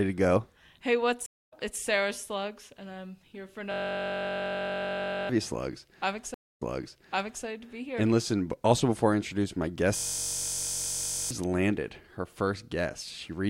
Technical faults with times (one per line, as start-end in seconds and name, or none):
1.26-1.53 stream reconnect
3.72-5.29 system hang loop
6.34-7.45 stream reconnect
9.96-11.31 system hang loop